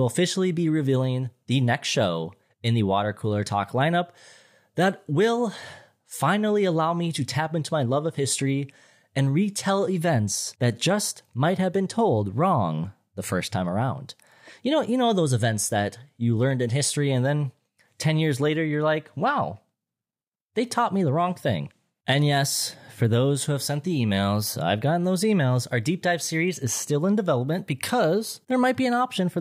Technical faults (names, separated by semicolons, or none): none